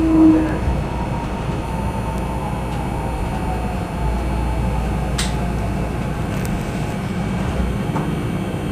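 From 0.0 to 1.65 s there is crude rate conversion. Linear interpolation without filtering, consistent with a 32 kHz to 48 kHz step, leaves a faint gritty fizz about 45 dB down, tracking loud, bright moments. A spectrogram shows inharmonic mirrored images, especially above 16 kHz.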